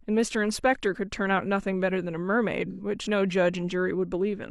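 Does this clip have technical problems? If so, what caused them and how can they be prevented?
Yes. From 2.70 to 2.81 s the speech turns briefly smeared and noisy, a sign of AAC frame loss with concealment. About 85 ms of coded audio went missing, which fits two lost AAC frames, and the decoder filled the gap by reusing the last good spectrum with scrambled phase. A plain dropout would leave a silent hole or a click, but here the gap is filled with a blurred, noisy echo of the preceding spectrum. Sending the stream over a reliable transport or adding forward error correction would prevent it.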